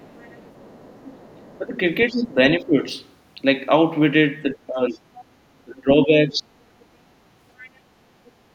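From the start to 2.27 s a second, much quieter voice runs underneath the talker, roughly 30 dB down. This is the other side's voice leaking through, likely far-end audio from a loudspeaker that the echo canceller failed to remove. From 1.38 s to 2.77 s the talker's own voice dips by up to about 15 dB in pieces totalling under a second. This is speech suppressed in double talk, likely with both sides active, and the canceller turning everything down.

The two faults are easy to separate by ear. Leakage adds a foreign voice. Suppression takes level and clarity away from the main voice.

The pattern repeats. The talker's voice is pulled down from 4.54 s to 4.99 s, by about 15 dB at worst. A scrap of the other side follows from 4.92 s to 5.24 s, roughly 25 dB below the speech. A deeper suppression, up to about 20 dB, sits between 5.59 s and 6.5 s. Brief, faint fragments of leakage then appear at 6.81–6.85 s, 7.62–7.70 s and 8.25–8.31 s.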